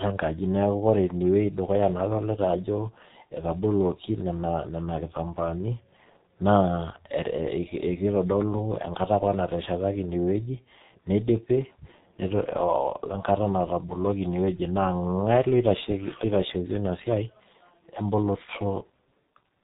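From start to finish the speech carries G.723.1 codec damage, and heavily so. Nothing above 4 kHz survives, so it sounds muffled, while the slowly updated 30 ms frame model leaves a hoarse texture and smeared consonants, consistent with a 6.3 kbit/s stream.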